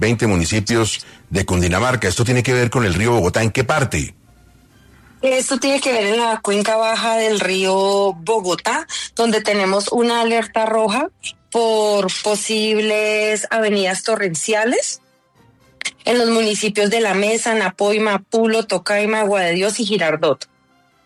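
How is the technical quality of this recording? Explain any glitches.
No glitches can be heard anywhere in the recording, and the signal stays technically intact throughout with nothing interrupting or degrading it.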